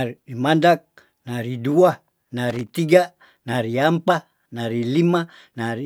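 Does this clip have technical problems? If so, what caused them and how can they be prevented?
Yes. From 2.50 to 2.71 s the speech is broken by an irregular burst of scratchy crackle. That is loose connector crackle: a worn or dirty contact keeps making and breaking as it shifts, chopping the signal and adding pops. Cleaning and reseating connectors, then securing cables against movement, prevents it.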